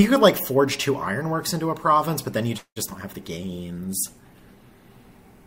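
A short clip of call audio with three network faults. At 2.57 s the sound stalls until 2.78 s. The last sound is stretched into a fading buzz, then goes silent for about 90 ms. When it resumes, nothing is lost. The stream simply continues later, about 190 ms behind. This is a call audio freeze, most likely from held-up packets draining the jitter buffer. At 2.90 s there is a brief smear lasting about 25 ms. This is short concealed packet loss. Roughly 20 ms of real audio never arrived. The receiver bridged the hole by extending the preceding sound, then blended back in. From 3.47 s to 4.97 s the audio turns rough and muffled, with the top end dulled. This is a call bitrate drop. The encoder was pushed to far fewer bits, which fits a fall from around 128 kbps to about 21 kbps. It stays at that floor for about 1.4 s. The coarse coding and lost high frequencies last until the rate climbs back near the end.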